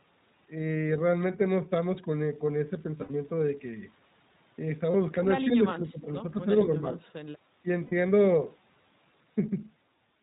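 The whole recording is speech carried through the iLBC codec. Nothing appears above 4 kHz, so a spectrogram shows a hard ceiling at that frequency. The voice is plainly rough and slightly synthetic, which fits iLBC's 20 ms mode at about 15.2 kbps. Each frame's excitation is coded on its own, and that leaves a rough texture across the harmonics.

From 2.98 to 3.15 s come lost iLBC frames: about 120 ms of missing audio scattered over 160 ms, with the longest run around 70 ms, which suggests roughly six 20 ms frames. The decoder fills each hole by repeating the last pitch cycle blended with noise. It sounds like a held, buzzy vowel. On a spectrogram it shows as frozen, evenly repeated harmonic stripes that fade slightly. A single 20 ms loss at 4.92–4.95 s gives a brief buzzy blip. Between 5.46 and 7.66 s the level dips repeatedly: about 15 dB at 5.46–6.10 s, about 5 dB at 6.40–6.50 s and 6.66–7.00 s, and about 15 dB again in a short 7.62–7.66 s bite. 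The voice thins and partly drops out. The likely cause is speech suppressed in double talk, where an echo canceller confuses the talker with loudspeaker echo and ducks both. The waveform envelope shows sudden notches, and the spectrogram shows the upper harmonics dimming. At 7.84–7.93 s, 80 ms of lost frames, about four, brings another held buzz, and the voice is right again almost immediately afterwards.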